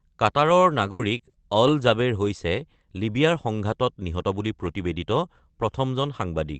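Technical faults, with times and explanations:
0.61–1.35 s, repeated packet loss (robotic sound): four holes open up just before "অল জাবেৰ হৈছে", the longest 80 ms, about 160 ms in all. Each is patched by stretching the previous sound, so roughly a fifth of the stretch is filler and the result turns choppy. A spectrogram shows frozen, repeated harmonic bands with sharp vertical seams, all capped near 8 kHz by the call codec. The waveform shows flattened, looping cycles.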